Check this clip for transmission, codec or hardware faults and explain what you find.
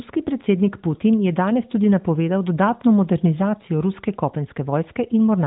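No transmission, codec or hardware faults found; the speech passes through an AMR-NB narrowband path, which fits a 12.2 kbps mode, with nothing above about 3.8 kHz and only light codec colouring.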